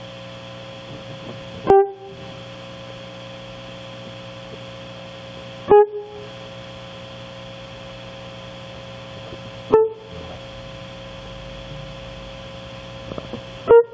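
Gain pumping runs through the whole music clip. The level ducks by around 15 dB under each loud passage, likely from gain set too high.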